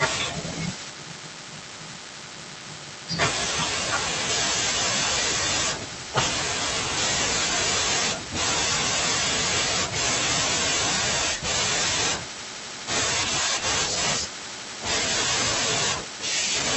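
Nothing in the recording stood out as a technical problem on listening.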